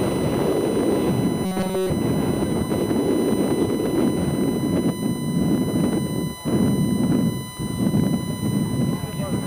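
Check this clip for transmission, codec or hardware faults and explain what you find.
Two faults are present: a steady USB whine across the whole clip and a short robotic stretch near the start.

USB whine runs throughout, a fixed tone at 1 kHz, strongest at that fundamental and sitting roughly 15 dB below the signal. The USB bus draws current in 1 ms frames, and that periodic load leaks into the audio through the power or ground connection, producing a constant pitch at the frame rate. It sounds like a thin, unchanging whistle underneath everything.

Robotic sound from repeated short buffers occurs from 1.46 to 1.90 s. When fresh audio fails to arrive in time, the software fills the gap by replaying the last few milliseconds, while the real audio for that span is skipped. This stretch is essentially all repeats. The imposed buzz at 188 Hz points to a loop of about 5.3 ms, which likely reflects a repeated buffer of roughly that size. 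It is heard as a rigid, metallic drone that only loosely follows the underlying sound.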